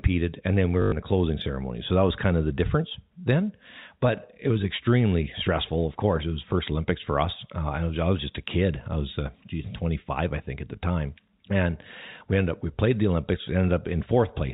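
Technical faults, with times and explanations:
0.82 to 0.92 s, packet loss with last packet repeated: right after "and then we", about 100 ms goes missing and the receiver keeps replaying the last packet it got. The repeats don't line up with the pitch, so you get a buzzy robotic stutter before "the closing ceremony", with the buzz rate fitting 20 ms packets, around 50 Hz.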